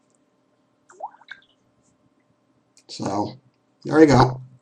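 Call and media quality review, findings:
MP2 compression, entire clip: dull top end, gurgling granular texture, upper bands flickering. Likely cause: low-rate MPEG Layer II encode, fits roughly 80 kbps. Too few bits leave upper sub-bands switched off, remaining bands coarsely quantised. Damage plainly audible.

DAB burbling, 1.22 to 1.66 s: short noise blips in single sub-bands over the sound. Weak-reception bit errors, well under one percent, slipping past error correction. Corrupted samples put blips of noise in single sub-bands; corrupted scale factors make sub-bands jump in level for up to a frame.

DAB burbling, 4.10 to 4.36 s: shorter, denser burst of the same sub-band blips. Somewhat higher error rate, still below one percent, across 14 frames. Corrupted sub-band data again spikes individual bands.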